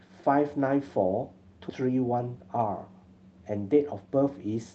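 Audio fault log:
1.69–1.71 s skip ahead: roughly 0.7 s of audio vanishes and the two sides butt together with no silence or fill, unlike a dropout, which leaves an audible gap.
1.81–2.67 s jitter buffer speed-up: the receiver trims short pitch-period slices, about a tenth of a second in total, so the sound runs 11% faster but keeps its pitch, unlike a resampling error.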